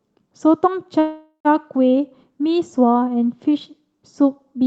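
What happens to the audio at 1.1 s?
Packets were likely held up in transit, so the jitter buffer ran dry and a call audio freeze fills 0.99 to 1.47 s. The last sound is extended into a fading buzz or hiss ending in about 90 ms of silence, then resumes where it stopped, 0.45 s late, with nothing lost.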